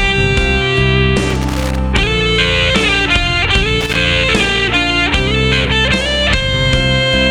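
A worn or dirty contact making and breaking as it moves causes loose connector crackle, chopping the signal into irregular scratchy bursts from 1.30 to 1.78 s and 3.81 to 4.00 s.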